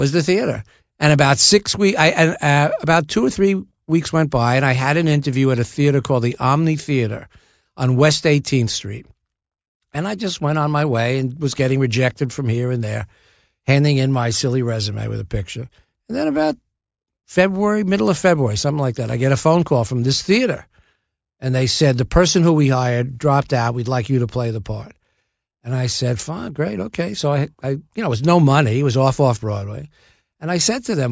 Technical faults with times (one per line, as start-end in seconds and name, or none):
none